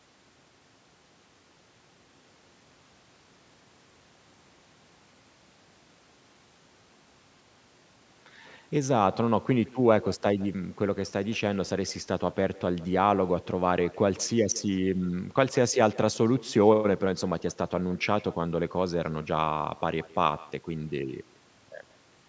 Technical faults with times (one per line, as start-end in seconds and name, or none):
0.00-22.28 echo with no canceller